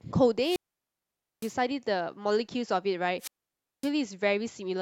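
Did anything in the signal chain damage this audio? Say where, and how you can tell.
Yes. Wireless microphone squelch dropouts, in the analogue radio link before the receiver output, hit the speech twice: from 0.41 to 1.56 s, with a mute of about 0.86 s, and from 3.18 to 3.91 s, muted for about 0.56 s. Each time the FM signal fades, hiss swells, then the receiver's squelch shuts the output off. On a spectrogram that looks like a broadband noise smear followed by an empty gap, and the waveform flatlines before speech resumes.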